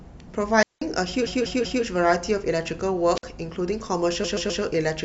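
A speech recording with two kinds of fault. Two wireless microphone squelch dropouts occur, at 0.60–0.82 s with a mute of about 190 ms, and at 3.15–3.24 s with a mute of about 54 ms. The radio signal fades, hiss rises, and the receiver's squelch cuts the sound to near silence. There are also two runs of repeated frames. From 1.26 to 1.84 s, a 192 ms stretch plays three extra times, adding 576 ms. From 4.24 to 4.62 s, a 128 ms stretch repeats three more times, adding 384 ms. Each run is heard as a stutter where the same compressed audio was written or sent again.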